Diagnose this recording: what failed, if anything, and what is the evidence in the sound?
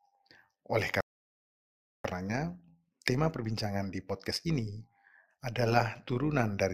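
Overlap-add ripple runs through the whole clip at call processing. Level rises and falls by about 6 dB, around 100 times a second. Frame gains don't sum evenly, so the speech buzzes.

A playback stall silences the speech from 1.01 to 2.05 s, about 1.04 s. The likely cause is a buffer underrun or a blocked player thread.

Time-compressed catch-up follows in playback, from 2.05 to 5.05 s. Speech runs 1.15 times fast at normal pitch. Small cross-faded cuts drain the backlog.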